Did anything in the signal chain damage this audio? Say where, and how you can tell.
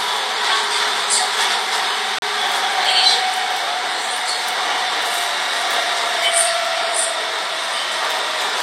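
Yes. A gap between stream segments at playback: a hard-edged 35 ms silence at 2.19 to 2.22 s, near a 2-second segment boundary. Unlike a dropout, nothing is missing. The sound simply resumes late.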